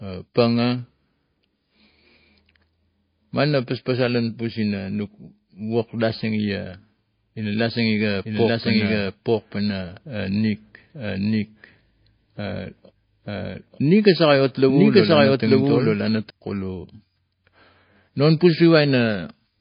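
Speech, and the whole clip has that watery, swirly quality of low-bitrate encoding, most likely MP3 compression. There's nothing above about 5.1 kHz, so the top end is cut off flat, and the damage is plainly audible: weak frequency detail flickers in and out from frame to frame as the encoder runs short of bits, s sounds get a metallic chirp, and attacks smear. All of that fits a rate somewhere around 24 kbps. Then from 8.24 s to 16.30 s there's a doubled audio track. A second copy of the speech runs about a second behind the original and at roughly the same level, so you hear everything twice, overlapping. It's full-band with no decay or room colour, so it's not an echo. It starts and stops abruptly at those times, and the likely cause is the same audio being captured a second time by a slower path, or an edit leaving two copies out of step.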